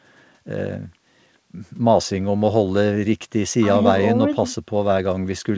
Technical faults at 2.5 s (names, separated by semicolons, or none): none